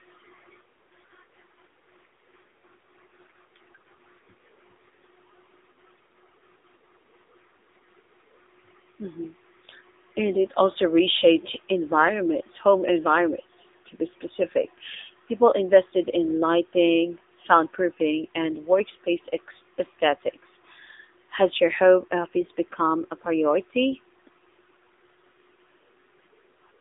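AMR narrowband mobile codec damage runs through the whole clip. The speech is squeezed into a telephone band of 300 Hz to 3.7 kHz, with nothing above 3.8 kHz, and the sparse vocal-tract model leaves it plainly buzzy and synthetic, which fits a rate near 7.95 kbps.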